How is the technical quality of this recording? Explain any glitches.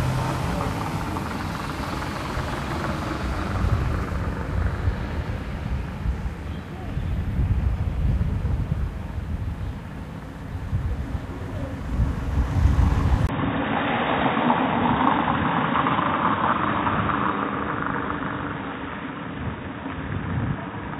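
The quality drops partway through: from 13.27 s to the end, the everyday sounds turn dull and boxy, with a brief gap right at the change. This fits an input switched to a poorer device, likely a different microphone or a headset's call profile. Nothing passes above 3.8 kHz, the level falls a few dB, and a new, faint noise floor appears. A spectrogram shows the upper band abruptly emptied after a 20 ms blank, and the waveform steps slightly smaller.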